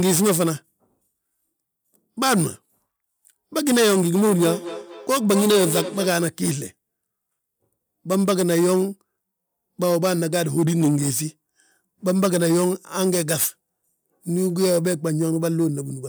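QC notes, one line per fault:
4.28–6.26 s, feedback echo between two devices: the speech comes back roughly every fifth of a second, peaking about 9 dB below the direct sound and getting thinner and more ringing each pass, because a second device's speaker is feeding this mic and neither canceller catches it.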